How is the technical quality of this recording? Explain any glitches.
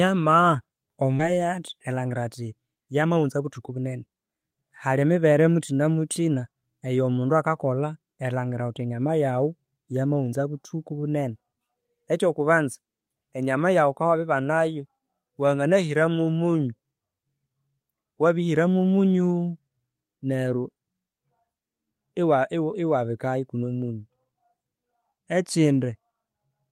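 The recording has two timing glitches, both from how the audio was delivered over a network call.

At about 1.2 s there is a skip ahead: roughly 0.7 s of speech was discarded, probably by an overflowing jitter buffer, and playback joins the two sides almost directly. Unlike a dropout, there is no silence or filled gap, just an abrupt jump forward.

From 3.02 to 5.32 s a jitter buffer speed-up runs the speech at about 110% to shed excess delay, trimming roughly a fifth of a second in many small pitch-period cuts. It sounds hurried but keeps its pitch, which separates it from a resampling error.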